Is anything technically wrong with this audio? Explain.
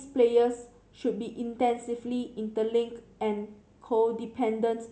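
No, nothing stood out as technically wrong when listening to this speech recording.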